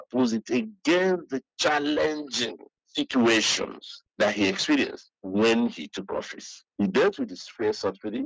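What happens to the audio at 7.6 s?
Nothing goes wrong at 7.6 s: the audio runs on intact through that moment, with only the ordinary call microphone processing shaping it, which trims the deepest bass and leaves nothing above 8 kHz.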